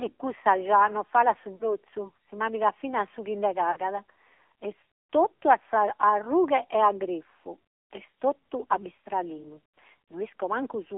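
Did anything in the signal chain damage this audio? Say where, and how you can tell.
Yes, at the codec stage: the whole speech clip went through the AMR narrowband mobile codec. Everything is confined to roughly 300 Hz to 3.4 kHz, and the voice has a buzzy, synthetic edge from the sparse pulse excitation, which fits a low mode near 7.4 kbps.

The network stage also damaged it, with lost AMR speech frames at 1.56–1.75 s after "già nos falat su", 3.72–3.78 s after "finas su chi nde", and 9.03–9.06 s after "grifu est totu a". At each point the decoder stretches the last good pitch and tract shape with fading gain, a brief drawn-out fade that fits two missing 20 ms frames.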